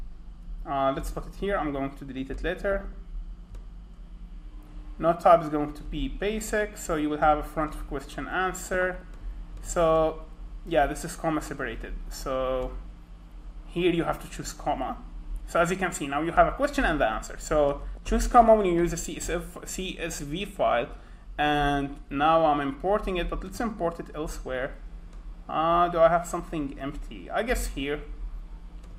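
Short noise blips at 2.72–2.93 s, 8.60–9.02 s and 17.95–18.14 s are DAB burbling: uncorrected bit errors make individual sub-bands jump in level.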